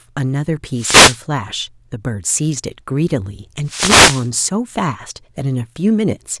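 Wireless microphone noise hits occur from 0.75 to 1.20 s and again from 3.65 to 4.29 s. In each, the analogue FM radio link from the microphone briefly loses strength as reflected paths cancel the direct signal, so the receiver's own noise climbs toward the level of the speech. Each hit is heard as a short swish of static lasting about 0.4 to 0.6 s, washing over the speech until the signal recovers.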